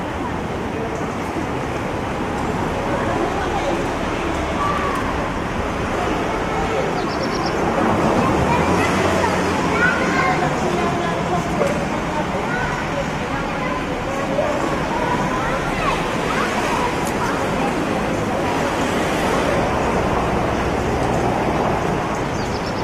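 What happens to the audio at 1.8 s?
Nothing goes wrong at 1.8 s; the sound carries through that moment intact, with no dropout, click or other fault.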